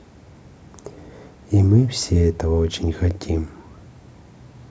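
No technical faults are audible anywhere in the speech recording.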